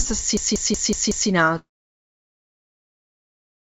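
Speech with a system hang loop from 0.37 to 1.30 s: one 186 ms slice (which fits an 8192-sample buffer) repeats five times at about 5.4 Hz, a machine-gun stutter that shows as identical repeating blocks on the waveform and spectrogram, with roughly no audio lost. From 1.59 s to the end, a long network dropout is the likely cause: the sound trails off into a fading buzz or hiss and then silence or a low steady noise, below the 8 kHz ceiling of the G.722 call path.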